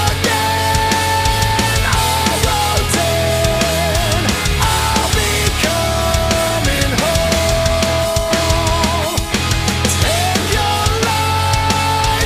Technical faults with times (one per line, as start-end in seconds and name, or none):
none